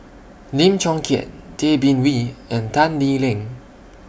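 No technical faults are audible.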